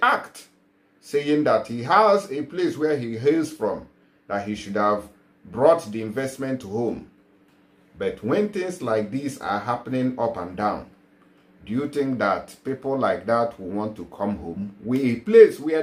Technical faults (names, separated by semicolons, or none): none